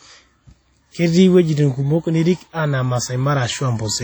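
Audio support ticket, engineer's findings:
Likely WMA compression at a low bitrate, near 32 kbps, throughout: long-block transform quantisation smears noise across tens of milliseconds, giving heavily ringing, washy speech with hiss that pumps alongside it.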